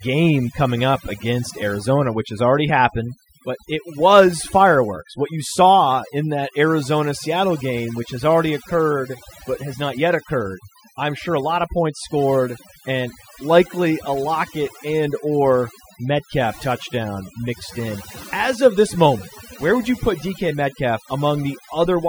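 Throughout the recording, overdone noise removal is audible. The reduction was set too aggressively, so frequency bins near the estimated noise floor are cut hard or gated out, taking quieter speech detail with them. Gaps fall to near-silence with twinkling artefacts.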